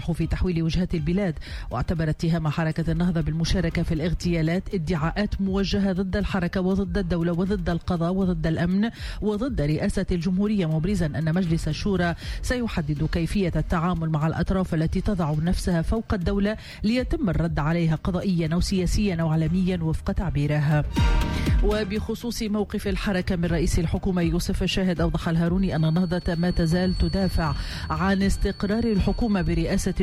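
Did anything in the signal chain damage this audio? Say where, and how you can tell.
Yes: a feedback whistle from 25.53 s to the end, a thin single-pitch 4.4 kHz tone well below the signal, likely from a loudspeaker-to-microphone loop held just short of runaway.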